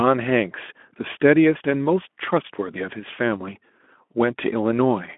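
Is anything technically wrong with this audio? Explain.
No, nothing is technically wrong: the speech has the narrow telephone-style band of a Speex codec link at 15 kbps, running from about 200 Hz to 3.4 kHz with nothing above 3.8 kHz, and no faults are audible.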